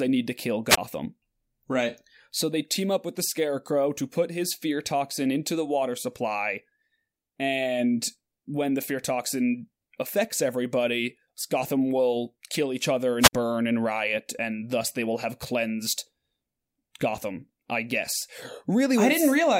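Speech with two short holes: a brief swell of hiss, then near silence, at 0.68–0.78 s after "need to kill" (about 23 ms muted) and 13.19–13.33 s between "will kill each other" and "burn and riot and" (about 51 ms). This is wireless microphone squelch dropout: the radio signal fades until the receiver's squelch mutes the output.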